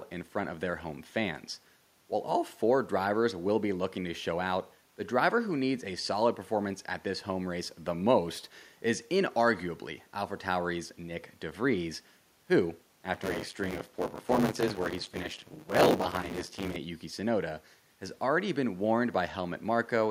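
Speech recording, with quiet room noise sitting about 40 dB under the voice, shows buffer tearing from 13.13 to 16.76 s: a rattling 100 Hz buzz where roughly a third of each 10 ms period replays audio from about 20 ms earlier. On a waveform this shows as regular hard splices, and on a spectrogram as vertical striations with 100 Hz harmonic banding that vanish in pauses.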